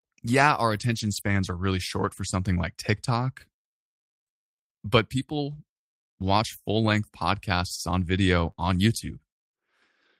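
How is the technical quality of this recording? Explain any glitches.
The recording has network glitches of two kinds in this speech clip.

The first is lost packets rebuilt from error correction. From 0.75 to 1.37 s, between "yeah our" and "are really", a long run of packets went missing. Shorter ones follow at 2.07 s, before "for something like", at 5.21 s, from 6.85 to 6.95 s between "watch full" and "podcasts on", and at 8.47 s. Each lost packet was replaced by a low-bitrate copy carried in the next one. So nothing drops out. Those stretches just sound rougher and noisier.

The second is short concealed packet loss. Right after, from 8.51 to 8.59 s, two 20 ms pieces never arrived in time. The decoder extended the preceding sound to cover them, then blended back into real audio. The result is a brief smear or wobble, lasting under a tenth of a second.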